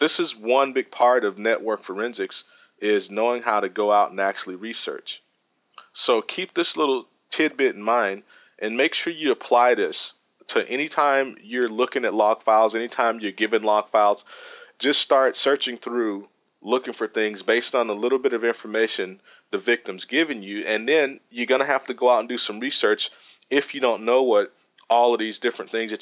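Nothing technical goes wrong anywhere in the recording, so there's nothing here to flag.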